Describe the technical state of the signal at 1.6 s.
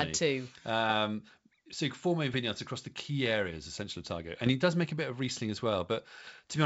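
At 1.6 s the speech is intact, with no fault to hear there, and it carries the ordinary character of G.722 wideband telephone coding at 64 kbit/s.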